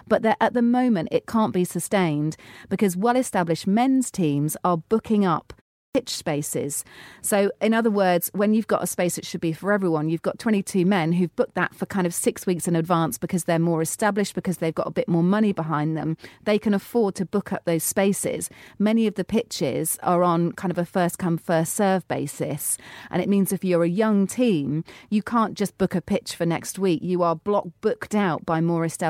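Speech, with a clipped start after a pause at 5.89 s. A pause of 0.36 s comes just before it. The output device idles in that silence and is slow to wake. About 59 ms of the onset is swallowed, so the sound begins abruptly.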